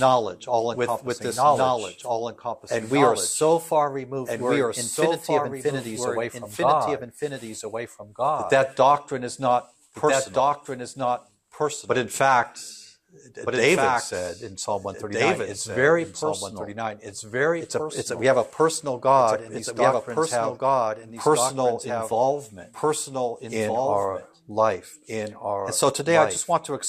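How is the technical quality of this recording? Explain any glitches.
The recording carries a doubled audio track for its whole length. Everything is heard twice: a second, full-band copy trails the original by about one and a half seconds, only a few decibels quieter. It has no reverberant tail or room colouring, just a clean, displaced repeat. The likely cause is the same signal arriving again through a slower capture path, or an edit leaving two misaligned copies stacked together.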